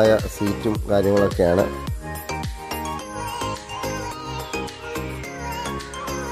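No technical faults can be heard anywhere in the clip. The sound holds steady throughout, with no breaks, jumps or interruptions at any point.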